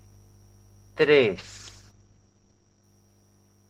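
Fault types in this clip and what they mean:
call bitrate drop: the call's bandwidth estimate fell, so from 1.36 s to 2.93 s the speech turns rough and watery and the highs are cut off at 8 kHz instead of 20 kHz. That fits an encoder dropping from 32 to 12 kbps.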